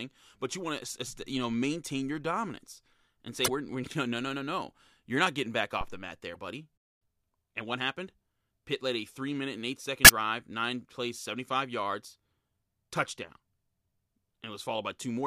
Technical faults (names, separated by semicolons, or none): damaged data in a compressed stream; phantom power thump; playback stall; time-compressed catch-up